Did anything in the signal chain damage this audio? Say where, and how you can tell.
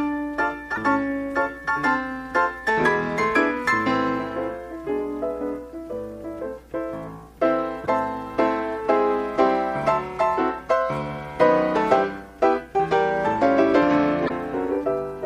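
Yes. Damaged data in a compressed stream, at the codec/storage stage: corrupted bytes made the decoder misread frames and resync on the next header. Each event is a brief glitch of about 55 ms, at 0.72, 7.83 and 14.25 s.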